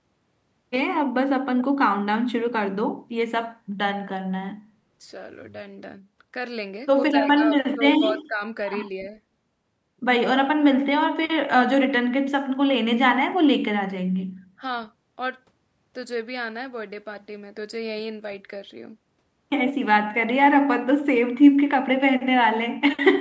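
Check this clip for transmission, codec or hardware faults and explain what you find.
Speech suppressed in double talk occurs at 7.37–7.51 s, 7.74–8.41 s and 14.58–14.62 s. The speech level dips by about 10 dB, then about 15 dB in the longest stretch, and only slightly at 14.6 s, likely because an echo canceller mistook overlapping talk for echo.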